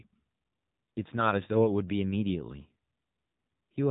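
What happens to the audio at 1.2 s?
At 1.2 s you're hearing the same thing that runs through the whole clip: an AMR narrowband mobile codec. Nothing gets through above about 3.8 kHz, so the speech sounds boxed-in and phone-like. The codec rebuilds each 20 ms frame from a vocal-tract model fed by a handful of pulses, and with so few bits the result is buzzy and synthetic. The damage is plainly audible, which fits a low rate of around 7.4 kbps.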